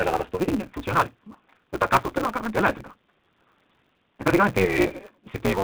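From start to finish the speech carries a steady buzz at 188 Hz and plays back hurried, about 1.88 times faster than normal, yet at roughly its natural pitch. This is a block size mismatch (truncated): one stage hands over longer blocks than the next stage reads, and the tail of each block is discarded. The repeated cut at each block boundary produces the buzz, and the missing portions speed up the timeline. The buzz rate fits a read size of 256 samples.

Also throughout, the speech has a rough, slightly synthetic grain and a dull top, with nothing above 4 kHz. That sound fits the G.729 codec at 8 kbit/s, and the damage is plainly audible. The codec does not store the waveform. It rebuilds speech from a vocal tract filter, a pitch predictor and a few pulses per subframe, and that reconstruction is what gives the sound its artificial edge.

From 0.44 to 0.49 s the sound smears into a stretched, fading sound and then comes back weak before it recovers. 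This is VoIP packet loss concealed by the speech codec. About 60 ms of audio went missing, which fits three lost packets. The decoder filled the gap by extending its last pitch and filter settings at falling gain, and because each frame builds on the one before it, the distortion lingers past the gap.

The same kind of concealment shows up again from 4.65 to 4.78 s. This time about 20 ms was lost, consistent with a single packet, and the voice stays weak or distorted past the loss itself while the decoder's state recovers.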